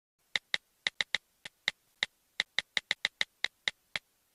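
Periodic USB or driver dropouts run from 0.94 s to 3.96 s. Some background process is stalling the USB link or audio driver every 0.5 s. Each time, roughly 10 ms of audio never reaches the output and is replaced by silence. That produces about seven evenly spaced ticks or small pops across that span, each a brief gap cut into the running sound. Because they are holes in the signal, they are heard only where sound is present.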